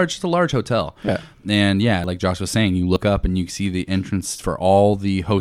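Dropped buffers (overrun) occur at 1.08 s, after "a large hotel", at 2.04 s, after "and yeah", and at 2.96 s, before "up and you see". Each is a sudden jump where the speech skips forward by about 40 ms with no gap, likely because samples were overwritten before being read.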